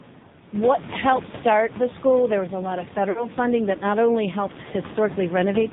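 A speech clip carried through the AMR narrowband mobile codec. Nothing above 4 kHz survives, and the voice sounds heavily buzzy and synthetic, which fits a low mode around 5.9 kbps. Room noise sits about 18 dB below the speech. From 3.10 to 3.27 s there are lost AMR speech frames. The decoder stretches the last sound and fades it out, which fits about 60 ms of missing 20 ms frames.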